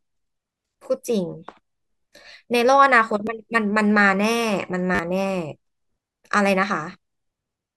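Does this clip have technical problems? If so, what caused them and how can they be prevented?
Yes. A repeated buffer occurred twice: new audio arrived late, so the device replayed its last block. At 3.27 s one extra repeat gives a click, and from 4.95 to 4.99 s four repeats give a brief buzz, consistent with a 10 ms buffer. Larger buffers or higher priority for the audio thread would prevent this.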